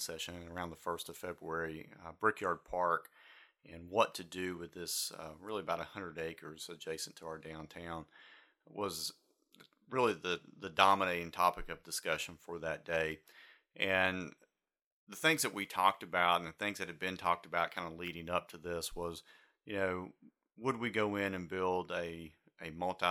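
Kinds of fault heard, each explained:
Nothing here stands out as a technical fault; the speech comes across steady and intact, with no dropouts, glitches or distortion to point to.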